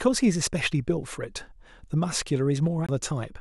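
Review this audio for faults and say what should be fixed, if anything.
A CD skip occurs at 2.86 to 2.89 s in this speech. The playback mutes for about 20 ms. The laser lost its track and landed on another turn of the spiral, so the sound resumes from a different point. Re-rip from a clean, scratch-free disc using error-correcting extraction, with the player isolated from knocks.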